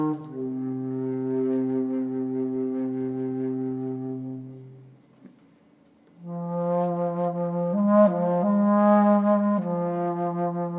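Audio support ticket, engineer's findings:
No audible faults found in this recording.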